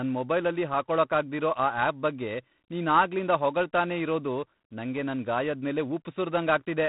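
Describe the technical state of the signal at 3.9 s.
At 3.9 s the speech carries G.726 ADPCM damage, as it does across the whole clip. Each sample is coded as a few bits describing its departure from an adaptive prediction, and the harsh, rasping hiss that rises and falls with the speech level fits the 24 kbit/s rate. A spectrogram shows nothing above 3.8 kHz and a grainy noise floor filling the gaps between harmonics. The waveform looks fuzzed along its edges.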